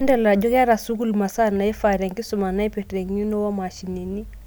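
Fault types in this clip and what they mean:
No fault of any kind turns up here; it's just speech, with nothing getting in the way of it.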